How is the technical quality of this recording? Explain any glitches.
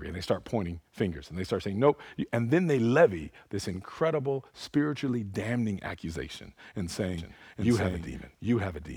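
There's one real glitch near the end. From 7.18 s, right after "spiritually damning accusation and", a doubled audio track kicks in. The speech is repeated, about as loud, trailing roughly 0.7 seconds behind with no room tail, and it runs to the end. It's likely a second, slower capture path mixed in.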